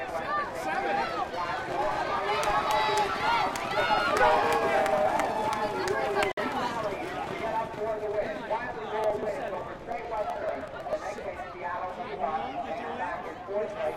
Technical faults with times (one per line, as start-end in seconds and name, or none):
6.32-6.39 Bluetooth stall
9.04-11.24 periodic USB or driver dropouts